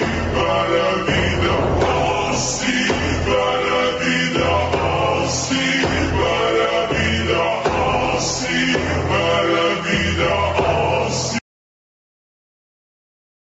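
Right from the start there's gain pumping: the gain swings by around 5 dB, so everything sounds squashed and flattened. That's most likely gain set far too high with a fast limiter clamping down. At 11.39 s the sound cuts out to silence and stays that way to the end. It's a dropout with no room tone left at all, likely the input being lost while the recorder kept writing silence. The top end stopping at about 8 kHz is just the call path's Opus bandwidth.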